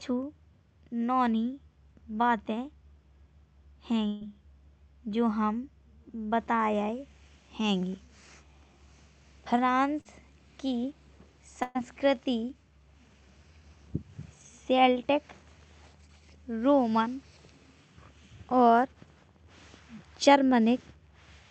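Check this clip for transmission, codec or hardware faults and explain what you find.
There are three transmission faults: two bursts of packet loss and one short concealed packet loss. The audio ends at about 8 kHz, as expected from a call codec path.

Burst of packet loss, 4.07 to 4.23 s and 11.63 to 11.77 s: the sound stalls into a held, fading continuation lasting about 135 ms and 120 ms, then jumps ahead. A run of packets was lost or arrived too late, so the receiver extended the last sound while the real audio in between was lost.

Short concealed packet loss, 10.01 to 10.07 s: a brief smear or wobble of roughly 40 ms. Audio missed the decoder's deadline, so the receiver synthesized a continuation of the preceding sound and blended it back into the real signal.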